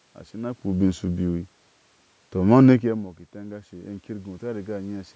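Automatic gain falling, 2.36 to 3.29 s: the gain control judged the speech too loud and eased its level down by about 4 dB, sinking voice and background together.

Automatic gain rising, 3.31 to 5.11 s: the input fell by about 14 dB, so the control lifted its gain by about 6 dB, swelling speech and room noise together over nearly two seconds.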